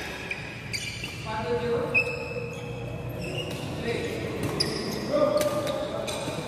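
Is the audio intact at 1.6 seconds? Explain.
Yes, at 1.6 seconds the audio plays through intact, with no dropout, click, distortion or other fault at that moment.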